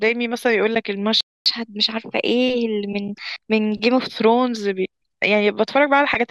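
A playback stall at 1.21 s cuts the speech off mid-flow, leaving about 250 ms of silence until 1.46 s, when it resumes from the point where it stopped. The likely cause is the player running short of buffered data or its output thread being blocked.

Catch-up at higher speed follows from 1.46 to 3.99 s. The player resamples its backlog to play 1.1 times faster, so the speech sounds hurried and raised by roughly a semitone and a half before settling back to normal speed and pitch.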